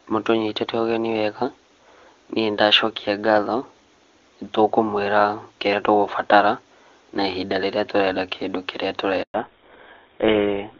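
Up to about 9.2 s the call is on the HD Voice path, AMR wideband, and it sounds clean with no obvious coding damage, which fits one of its higher rates. At 9.22 s there's a handover gap. The call hops from one network to another and no speech frames get through during the switch. The sound fades out within a few tens of milliseconds and stays silent for about 120 ms, until 9.34 s when the new link comes up. Whatever was said in that window is simply gone.

Right at 9.34 s, and running to the end of the clip, you get a fallback to narrowband. The new link is carrying an older narrowband codec, and the sound fits something like GSM full rate. Everything above 4 kHz disappears. The voice goes duller and rougher, losing the airy top end and crispness it had a moment before.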